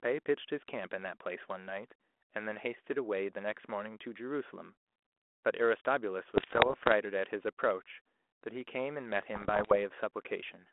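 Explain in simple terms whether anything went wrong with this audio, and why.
Bit errors on an ADPCM link cause pops and rough, crackly bursts from 6.34 to 6.93 s and again from 9.34 to 9.78 s. Flipped bits confuse the phone codec's running guess of the next sound, so each error rings on briefly as harsh noise and jumpy loudness.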